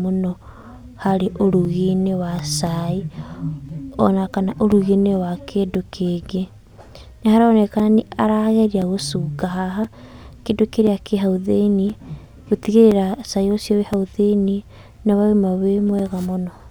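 From 0.63 s to 16.0 s, periodic USB or driver dropouts cut about 4 ms of speech to silence every 1.024 s, roughly fifteen times, heard as regular ticks. The waveform shows brief flat gaps; the spectrogram shows thin, evenly spaced vertical broadband lines.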